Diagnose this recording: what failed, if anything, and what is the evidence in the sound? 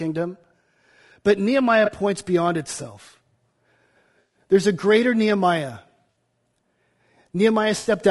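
Low-delay AAC compression, throughout: the speech sounds rough and grainy, with noise between harmonics, likely from AAC-ELD coding at a bitrate around 32 kbps.

AAC frame loss with concealment at 1.85 s (before "points beyond itself"), 4.19–4.36 s, 6.10–6.16 s and 7.77–7.91 s: network drops leave smeared, noisy patches where the decoder extrapolates spectrum.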